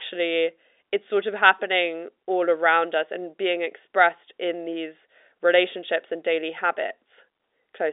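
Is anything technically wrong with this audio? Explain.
No, nothing technically wrong can be heard here.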